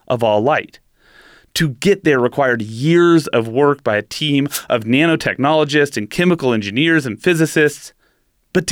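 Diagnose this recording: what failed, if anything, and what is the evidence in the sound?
The wireless microphone's radio link failed. Static bursts at 4.48–4.64 s, after "work by a team", and 7.66–7.72 s, after "and chemical engineers and", are wireless microphone noise hits, where fading let receiver noise through.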